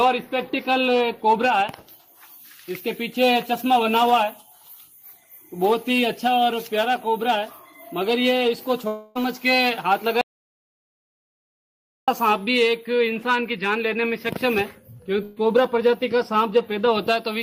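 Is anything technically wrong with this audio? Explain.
Yes, there are three separate interruptions.

From 8.87 to 9.17 s there is a long network dropout, most likely from audio that never reached the receiver. About 280 ms goes missing and is covered by 278 ms of continued sound that fades away. On a spectrogram this shows as smeared, decaying bands in place of fresh detail.

From 10.21 to 12.08 s comes an audio dropout to silence. The input was likely cut, and silence was written for about 1.86 s. The sound stops abruptly and returns mid-flow, and the gap is silent with no room tone left.

At 15.23 to 15.38 s a burst of packet loss removes 140 ms. The receiver extends the previous sound for 133 ms and turns it down, giving a brief held buzz or hiss. The waveform tapers, and the spectrogram shows a short, stretched patch before normal detail resumes.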